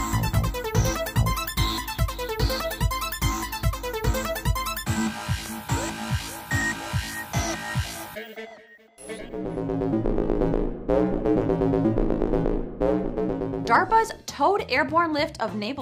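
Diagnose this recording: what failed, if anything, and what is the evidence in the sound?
A single loud pop occurs at 5.46 to 5.48 s, a sharp thump peaking a few dB above the audio, which continues underneath. The likely cause is a voltage step in the analogue wiring from a plug, switch or static. A spectrogram shows one full-height vertical stripe, and the waveform shows an isolated spike.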